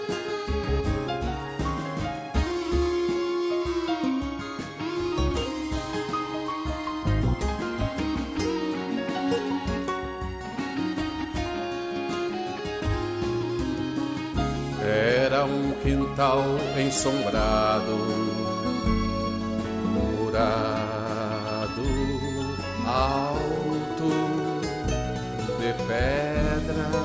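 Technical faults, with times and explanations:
No technical faults can be heard anywhere in the audio.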